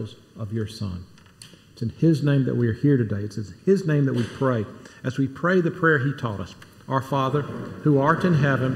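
Channel delay (comb filtering) runs the whole way through: one side lags under a millisecond, so the mono sum cancels at evenly spaced notches starting around 700 Hz, sounding hollow and phasey.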